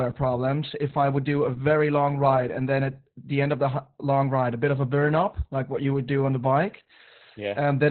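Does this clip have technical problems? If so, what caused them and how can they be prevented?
Yes. Opus voice compression affects the whole clip. Nothing survives above 4.2 kHz, and the speech sounds muffled, hoarse and slightly robotic. That points to Opus's SILK coder in narrowband mode at a very low rate, which fits about 8 kbps, coding the excitation coarsely. To prevent it, encode at a higher bitrate so Opus keeps a wider band and finer detail.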